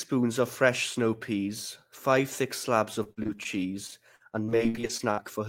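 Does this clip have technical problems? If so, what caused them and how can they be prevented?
Yes: repeated packet loss (robotic sound) at 3.03–3.47 s, just after "peas five thick slabs", and again at 3.87–5.19 s. Lost packets are patched by repeating the previous sound, which creates choppy speech with pieces missing. A spectrogram shows smeared, stuttering frames with vertical seams. Preventing it takes a steadier network and a larger jitter buffer.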